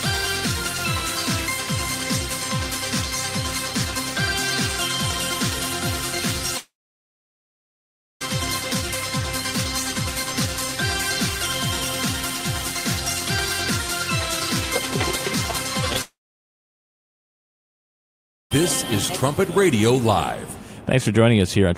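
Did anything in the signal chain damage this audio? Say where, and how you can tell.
Yes. At 6.57 to 8.28 s and again at 16.01 to 18.62 s, the sound smears into a brief fading buzz and goes silent for 1.5 s and 2.4 s. It then resumes with about 1.6 s and 2.5 s lost. This is a long network dropout, likely a gap in packet arrival too long for concealment to bridge.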